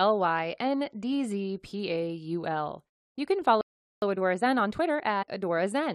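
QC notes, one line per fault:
3.61 to 4.02 s, playback stall: the speech just cuts out mid-flow for about 410 ms, then picks up again. That dead gap is most likely the player running dry of data or having its thread held up, so nothing reached the output until it recovered.
4.02 to 5.92 s, time-compressed catch-up: right after the gap the speech comes out hurried, running about 1.15 times normal speed with the pitch unchanged. The player is trimming its backlog by cutting small slices and cross-fading the joins.
5.21 to 5.24 s, compressed frames skipped: there's a tiny forward jump. Roughly 50 ms of audio goes missing, which fits a couple of dropped 23.2 ms frames.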